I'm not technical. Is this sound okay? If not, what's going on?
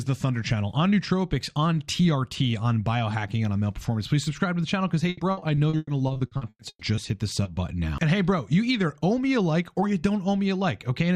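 No, there are two problems, both from a connection dropping pieces of the sound on the way.

From 5.09 to 6.99 s you get repeated packet loss, the robotic sound. Over those two seconds, more than a dozen small chunks went missing, the longest about a tenth of a second. Each time, the receiving end papered over the hole by stretching the last bit it had, and then the next hole arrived. Those patches add up to about two-thirds of a second, roughly a third of that stretch, so it comes out choppy.

Just after, from 7.43 to 7.47 s, there's a short concealed packet loss. A tiny slice, about 20 milliseconds, didn't arrive in time, and the receiver bridged it by carrying the previous sound forward before sliding back into the real audio. It's very brief, so it comes across as a quick smear or wobble rather than an obvious dropout.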